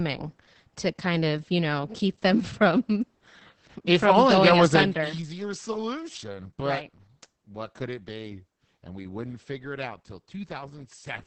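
Throughout, the speech passes through Opus voice compression running its SILK coder at a very low rate, which points to roughly 10 kbps. The band is cut to wideband with nothing above 8.3 kHz, and the coarse excitation coding leaves the speech heavily muffled, hoarse and slightly robotic.

From 4.66 to 5.31 s, just before "solution but", a level drop of around 10 dB is applied in unsmoothed steps, about forty a second, rather than as a glide. Each step clicks, so a ticking zipper noise rides on the speech while it fades down.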